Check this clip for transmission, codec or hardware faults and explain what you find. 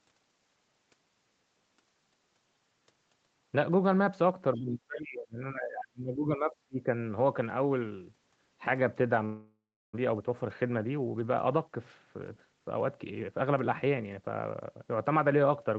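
Four faults are audible in this speech clip, all between about 4.5 and 14 s.

Other side's voice leaking through, 4.55–4.6 s: a brief scrap of a second voice, about 25 dB below the talker, likely loudspeaker echo the canceller missed.

Speech suppressed in double talk, 4.56–6.89 s: the canceller likely treats both talkers as echo and pulls the voice down by up to about 30 dB, for around two seconds.

Long network dropout, 9.25–9.97 s: about 400 ms of audio is lost. Concealment stretches the last sound into a fading buzz, leaving roughly 340 ms of silence before the speech resumes partway on, likely after packets stopped arriving.

Jitter buffer speed-up, 10.05–14.07 s: after the dropout the buffer holds too much delay, so it trims pitch-period fragments, around 300 ms in total. The speech runs at 107% speed with unchanged pitch and sounds hurried.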